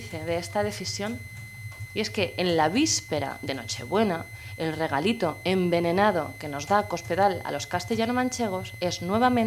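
A switching supply whistle runs from start to finish: a switching power supply is cycling in an audible burst mode, or beating against another supply, and its tone is leaking into the audio path. The result is a thin, steady whistle near 2 kHz, sitting roughly 20 dB below the wanted sound. Its pitch is not quite fixed, wandering slightly between about 2.04 and 2.06 kHz as the supply's load shifts.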